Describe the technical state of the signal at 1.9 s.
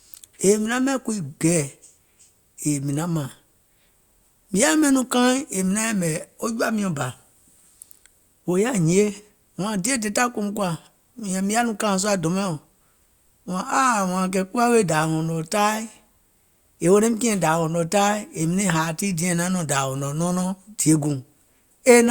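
At 1.9 s the speech signal is intact, with no audible fault at that point.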